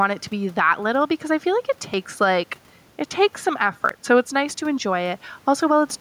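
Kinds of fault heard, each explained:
Gain pumping, throughout: the level rises and falls by roughly 5 dB as the talker gets louder and softer. The room noise sits about 37 dB below the speech. The likely cause is input gain set far too high with a fast limiter or compressor clamping every loud syllable, which squashes loud and soft passages closer together.
Audio missing between chunks, at 1.94 s and 3.89 s: the sound jumps abruptly at each point, with something around 40 ms skipped and the two sides butted together without a gap. The roughly two-second spacing fits a recorder or processor handling the audio in 2-second blocks and likely dropping a short slice each time it closes one block and opens the next, so a fragment of sound simply vanishes.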